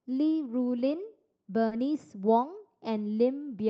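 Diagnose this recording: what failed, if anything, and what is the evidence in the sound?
Short concealed packet loss at 1.67 to 1.74 s, a network-stage failure. About 40 ms of the speech stream arrived too late or not at all, so the receiver's jitter buffer had nothing to decode. The concealment extended the preceding sound, repeating its pitch if voiced and shaping noise if not, then crossfaded back into real audio. The result is a brief smear or wobble in that window. Around it, the call codec's band stops near 8 kHz.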